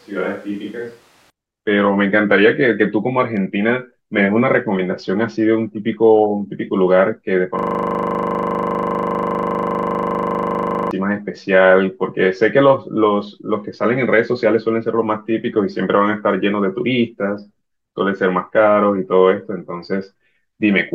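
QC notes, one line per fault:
0.00–1.30 s, switch to a distant microphone: already under way at the start, the sound is hollow and roomy with thinner bass and about 5 dB lower level, likely from a farther mic. On the spectrogram, the low end is weaker and the noise floor sits only about 25 dB under the signal.
7.59–10.91 s, system hang loop: one 40 ms piece of audio repeats exactly, over and over, giving a steady 25 Hz buzz because playback kept cycling a frozen buffer. The waveform shows identical tiling cycles, and the spectrogram shows harmonic lines spaced 25 Hz apart.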